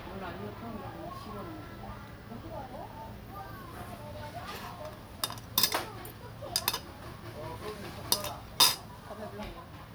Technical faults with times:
none

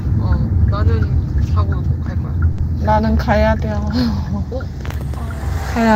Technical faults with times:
2.51-2.61 short stall from a late packet

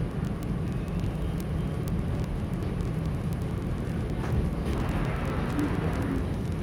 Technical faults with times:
0.11-6.61 word clock ticks

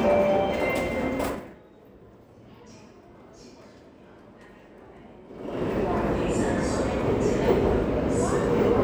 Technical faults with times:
5.25-5.62 zipper noise

